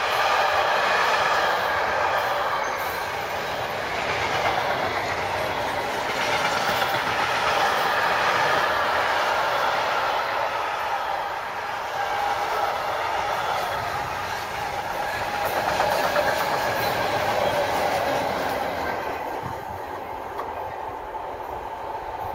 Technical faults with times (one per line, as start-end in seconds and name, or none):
none